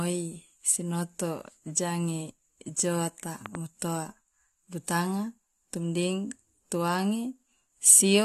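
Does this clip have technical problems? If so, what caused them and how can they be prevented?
Yes, there's a loud pop, actually a quick double pop, between 3.46 and 3.57 s, landing well above the speech level, roughly 10 dB louder, while the speech carries on underneath. It's likely a voltage step or spike from something like a cable being plugged in, a switch being flipped or a static discharge, with the downstream circuitry turning that jolt into a sharp thump. To prevent it, seat connections and flip switches before recording, and keep static away from the gear.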